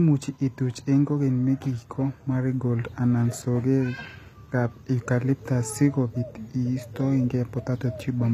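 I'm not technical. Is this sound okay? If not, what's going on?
No, the speech has a clear compression problem running through the whole clip. The s sounds and other hissy parts come out gritty and metallic or lispy, and nothing is left above about 14.9 kHz. This is likely HE-AAC compression. It stores only the lower part of the sound and rebuilds the treble by copying lower pitches upward, so the treble stays bright but is fake, rather than turning dull or muffled as plain heavy compression would.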